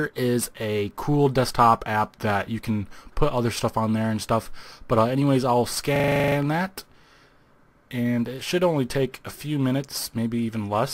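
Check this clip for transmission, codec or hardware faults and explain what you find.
One fault is present. From 5.96 to 6.36 s, a system hang loop: the system froze while the hardware kept replaying its ring buffer, so a 40 ms fragment of audio repeats ten times, a rapid 25 Hz stutter.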